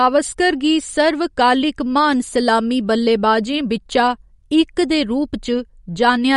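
MP3 compression, throughout the whole clip: the speech has a hard ceiling with nothing above 11.2 kHz, and the remaining sound has a watery, swirling texture, with s sounds turning metallic and chirpy and consonant onsets smeared. The likely cause is an MP3 encoder short of bits, which fits a low rate around 48 kbps. It cut the treble at a fixed point and dropped weak frequency lines that flicker on and off between frames.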